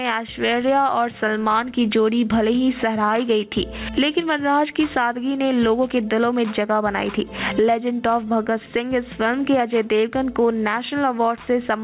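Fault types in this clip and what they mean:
Gain pumping: the level breathes all the way through, ducking by something like 15 dB under each loud sound. That's likely mic gain set far too high, with a fast limiter clamping it down.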